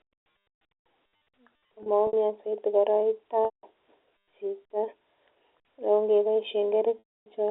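At 1.83 to 2.13 s, 3.45 to 3.63 s and 6.99 to 7.26 s, packet loss with pitch repetition bridges 90, 180 and 270 ms gaps by looping the last pitch period. It sounds like a held, buzzy tone, seen as frozen, evenly spaced harmonics before the waveform fades to silence.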